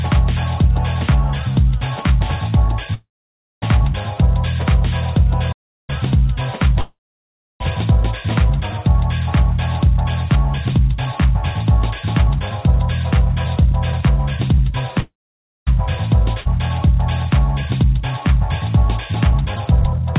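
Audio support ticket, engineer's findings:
Call audio freeze at 2.94–3.64 s, 6.81–7.62 s and 15.00–15.69 s. Sound smears into a fading buzz, then goes near silent for roughly 0.56 to 0.66 s. Audio resumes where it stopped, nothing lost. Likely cause: packets held up in transit and the jitter buffer running dry. Each gap adds 0.67 to 0.79 s of delay.

Playback stall at 5.52–5.90 s. Output cuts to silence mid-flow for 0.36 s, with no fading tail, then carries on. Points to the player starving of data or a blocked audio thread, likely. Distinct from the freezes: hard stop rather than a decaying fill.

Jitter buffer speed-up at 10.35–11.20 s (108 %), 12.76–14.89 s (104 %) and 17.84–20.00 s (103 %). Sound runs fast, pitch unchanged, hurried in the first stretch. Receiver trimming many short pitch-period slices to work off built-up delay. Roughly 70 to 100 ms removed per stretch.

Skip ahead at 16.41–16.47 s. 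Playback jumps forward with a 46 ms join, almost seamless. Roughly 1.5 s of audio dropped, delay cut by about a second. Points to audio dropped in transit or by the jitter buffer overflowing and discarding queued audio.

Path: G.711 mu-law at 64 kbps. Band ends at 4 kHz, as expected for that codec.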